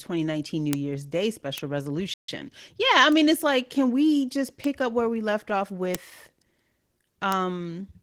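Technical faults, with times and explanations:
Throughout: Opus voice compression. The speech sounds plainly coded, slightly hoarse and robotic, with the low band handled by linear prediction and the top band rebuilt more coarsely above it. The band stays full rather than narrowed, and the roughness fits a low bitrate near 16 kbps.
0.73, 1.58, 3.12, 4.64, 5.95 and 7.32 s: bit error spike. Each is a single sharp tick lasting only a sample or two, where a flipped bit made the value leap and instantly return. Being broadband and unrelated to the speech, these ticks stand apart from the steady codec roughness.
2.14 to 2.29 s: playback stall. The speech drops to silence in mid-flow for about 0.14 s, then carries on. A clean gap of this length, rather than a click or garble, points to the player likely running short of data or being blocked.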